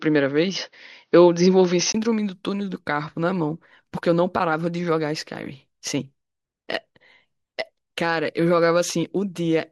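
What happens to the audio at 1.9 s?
At 1.94 s the speech suddenly opens up, ending a stretch from the start where the input was likely switched to a poorer device. Before that, nothing passes above 6.4 kHz, the level sits roughly 5 dB apart, and a faint floor of different noise is present. There is a brief gap of about 20 ms at the switch.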